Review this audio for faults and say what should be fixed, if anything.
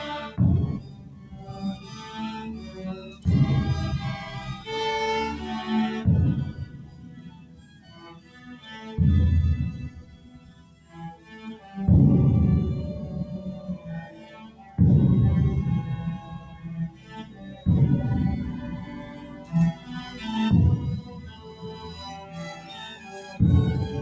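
A noise suppressor applied to music or sounds is active for the whole clip. A speech-oriented suppressor is treating sustained tones, ambience and reverberant tails as noise, so its gain swings by about 15 dB as material sustains and decays. The result is audible pumping and a thinned texture, while transients pass through largely intact. The bandwidth also stops at 8 kHz, which fits a wideband call codec such as G.722. Prevention: disable or bypass noise suppression for non-speech content, or switch the path to a music mode.

Sound cut by the noise suppressor occurs in eight spans where the gain reduction bites hardest. The deepest drops are about 9 dB at 0.79–2.0 s, 2.65–3.26 s, 6.51–8.48 s and 9.96–11.31 s, about 8 dB at 14.46–14.73 s and 16.42–17.66 s, and about 7 dB at 19.05–19.89 s and 21.01–22.68 s. In each span, held or decaying sound sinks below the surrounding level or its tail is cut short, because the suppressor's noise estimate has locked onto it. 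Prevention: keep suppression off for this content, or set its floor high enough that sustained sound is not pulled down as far.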